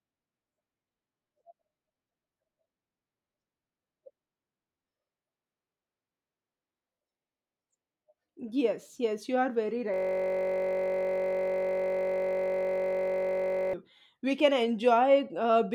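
At 9.94 s, just after "yes you are very", the system hangs while the sound hardware keeps replaying one 21.33 ms buffer, which fits a 1024-sample ring buffer. This system hang loop repeats until 13.73 s, heard as a steady 46.9 Hz buzz.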